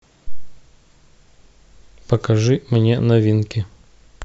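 Nothing goes wrong anywhere in this bit of speech, so there's no technical fault to point out.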